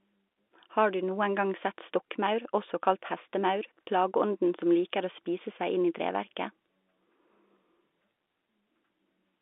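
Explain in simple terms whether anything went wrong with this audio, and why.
Nothing went wrong: the speech is carried over a standard telephone line using G.711 telephone coding, so it is confined to the usual 250 Hz to 3.6 kHz phone band, which gives the familiar narrow telephone sound by design.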